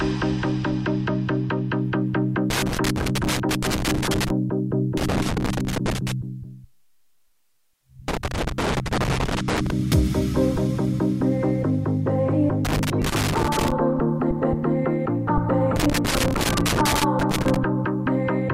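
Loose connector crackle breaks in five times, at 2.50–4.30 s, 4.97–6.12 s, 8.08–9.71 s, 12.65–13.72 s and 15.76–17.56 s. A worn contact makes and breaks, chopping the signal into irregular scratchy bursts. The waveform shows ragged dropouts and spikes, and the spectrogram shows scattered broadband vertical streaks.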